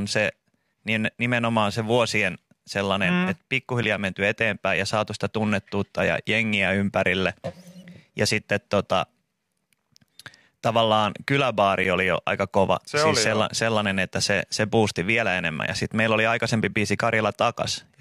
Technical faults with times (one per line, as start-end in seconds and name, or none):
3.83 gap between stream segments
7.84 gap between stream segments
11.84 gap between stream segments